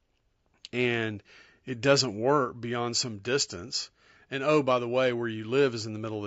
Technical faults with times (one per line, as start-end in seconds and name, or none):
0.00-6.26 low-delay AAC compression